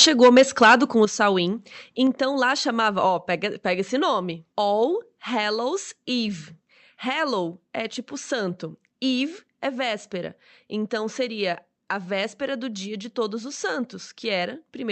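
From the start to 0.76 s, right before "com o", peaks break up with a harsh crackle. That's microphone overload, likely from input gain running about 5 dB past the converter's limit, with a small share of samples flattened. At 0.05 s the microphone volume stepped down by about 4 dB, and again at 1.05 s, just after "com o", by about 7 dB. Both are likely the call software's automatic gain control reacting to the clipping. The audio also reaches us band-limited to about 8 kHz through the call path.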